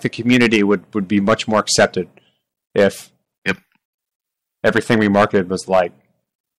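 Hard clipping hits the speech five times. The louder stretches run from 0.05 to 0.75 s, 1.17 to 1.85 s and 4.66 to 5.81 s, overdriven by about 10 to 11 dB. Shorter bursts at 2.78 to 2.87 s and 3.48 to 3.51 s sit about 6 dB over. The signal exceeds what a stage can pass. Its peaks are sliced flat, adding high harmonics. The long sections sound harshly fuzzy. The brief ones crackle.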